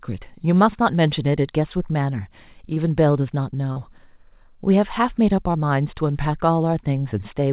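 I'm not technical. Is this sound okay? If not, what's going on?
No. There is short concealed packet loss at 2.74 s, 3.72 s and 5.52 s. Bits of the call, about 20 ms, 40 ms and 20 ms long, arrived too late, so the receiver patched each gap by stretching the preceding speech, heard as a quick smear or wobble. The audio came through a phone-style call link, which keeps it dull, with nothing above 4 kHz.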